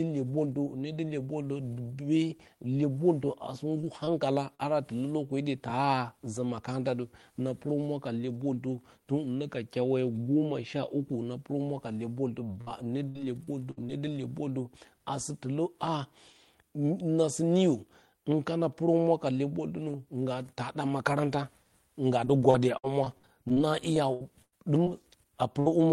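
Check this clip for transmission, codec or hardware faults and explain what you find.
The speech shows packet-loss faults of three kinds.

Short concealed packet loss at 3.81–3.85, 4.05–4.09 and 4.55–4.61 s: 20 to 40 ms gaps filled by extending the preceding sound, heard as brief smears or wobbles.

Burst of packet loss at 12.61–12.69 and 25.60–25.68 s: about 60 ms lost and replaced by a fading continuation of the last sound. Speech resumes with that portion missing.

Repeated packet loss (robotic sound) at 13.09–13.91 s (4 gaps), 22.25–23.58 s (9 gaps) and 23.94–24.88 s (4 gaps, longest 99 ms). About a fifth of each span is concealed, producing choppy speech with pieces missing.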